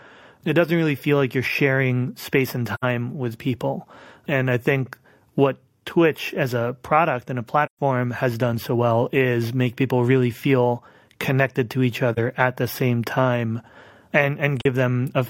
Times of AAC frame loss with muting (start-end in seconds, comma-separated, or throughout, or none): 2.74-2.84, 7.65-7.79, 12.13-12.19, 14.61-14.66